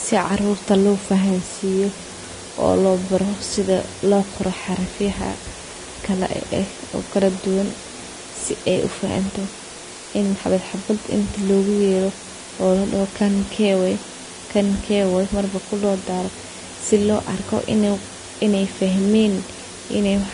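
From the start to the end of the clip, a steady, even hiss sits under the speech. It is low bit depth with dither. Noise was added before coarse rounding, so the error became constant white noise, roughly 15 dB below the speech. This fits about 6 bits.

Throughout, the speech also sounds grainy and rough, and consonant attacks are blurred. Nothing remains above 10.5 kHz. This is likely Vorbis compression at a low bitrate, around 32 kbps. The coarsely quantised treble has turned fine detail into noise.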